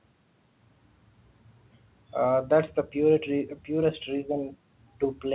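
No technical faults are audible.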